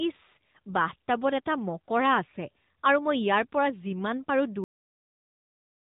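From the first moment, the speech carries AMR narrowband mobile codec damage. The codec rebuilds the voice from a vocal-tract model and a few pulses per frame. Nothing above 3.8 kHz survives, so the sound is boxed in. The buzzy, synthetic edge is plainly audible and fits a middling bitrate near 10 kbps.

At 4.64 s the audio hits a cut-off end. The final buffers were never written or played. The sound stops mid-utterance and drops straight to digital silence, with no decay. That silence runs to the end of the file.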